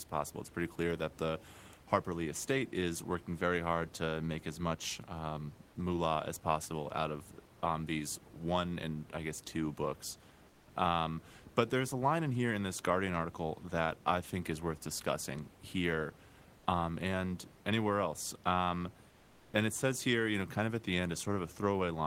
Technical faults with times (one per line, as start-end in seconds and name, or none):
10.49-10.67 comfort noise in place of the background
19.09-19.53 comfort noise in place of the background